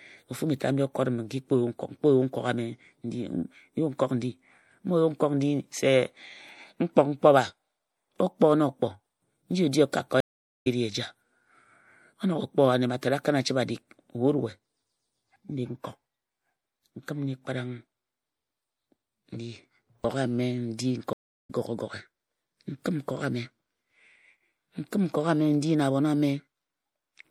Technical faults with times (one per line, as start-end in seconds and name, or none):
0.00-27.30 MP3 compression
10.20-10.67 stream reconnect
21.13-21.50 stream reconnect